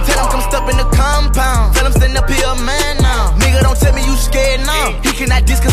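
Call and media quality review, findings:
No audible defects found on review; nothing to escalate.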